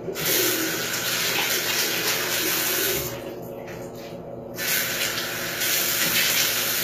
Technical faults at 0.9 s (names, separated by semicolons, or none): HE-AAC compression